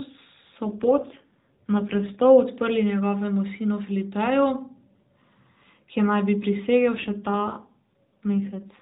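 From 0.64 to 2.23 s the speech goes rougher and buzzier, then clears up. That's an AMR rate drop: the narrowband mobile link steps down, which fits a move from 12.2 to 5.9 kbps, trading speech detail for error protection. The bandwidth doesn't change and nothing drops out; the voice just gets more synthetic. The same thing happens again from 6.94 s and stays that way to the end of the clip.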